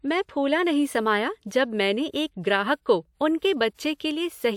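Pre-echo after "ग्राहक को" at 3.39 s (31 ms) and at 3.74 s (44 ms): block-spread codec noise hisses before each attack, unlike reverb, which trails after.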